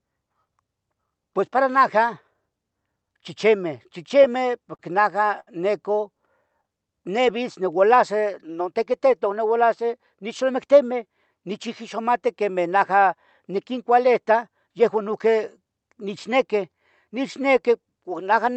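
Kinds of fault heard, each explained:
Repeated stalls (stutter): from 3.83 to 4.81 s, before "najah neco", five short holds totalling 84 ms, longest 42 ms, make the sound drag, unlike one single stall.
Short stall from a late packet: one isolated hold at 5.40 to 5.49 s stretches the sound by 70 ms while waiting for a late packet, with nothing lost.
Jitter buffer speed-up: from 8.72 to 9.21 s the audio runs at 107% speed, about 40 ms trimmed away, sounding hurried at unchanged pitch rather than held.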